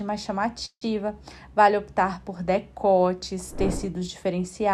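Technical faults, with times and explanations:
0.65 to 0.83 s, call audio freeze. The sound stops moving forward and the last moment is held as a fading buzz. It dies into silence for the final 80 ms or so. About 160 ms is filled this way. Then the audio resumes exactly where it broke off, so nothing is lost. Everything after it now runs about 160 ms late. The likely cause is delayed packets draining the jitter buffer, with the receiver stretching the last sound while it waits.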